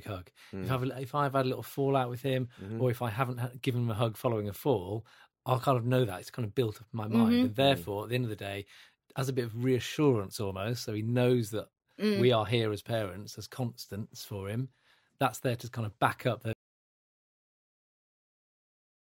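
Right after "kind of back up", at 16.53 s, the speech just stops dead and the clip runs on in total silence for the last two and a half seconds or so. That's an audio dropout to silence: no fade, no room tone, just silence. It sounds like the input went away, likely a lost connection or a mute somewhere, while recording carried on writing nothing, so whatever followed is simply gone.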